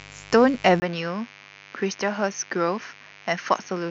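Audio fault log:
Throughout: mains buzz. A steady, raspy buzz sits roughly 25 dB under the speech, built from 50 Hz harmonics that switching spikes push into the kilohertz range.
0.8–3.90 s: input switched to a poorer device. After a 20 ms gap the speech turns duller and boxier, nothing above 6.6 kHz, a few dB quieter, with a faint new noise floor, likely a lesser microphone taking over.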